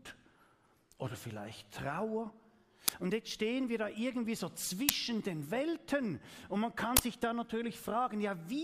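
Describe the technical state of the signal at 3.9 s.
At 3.9 s the signal is intact, with no audible fault at that moment.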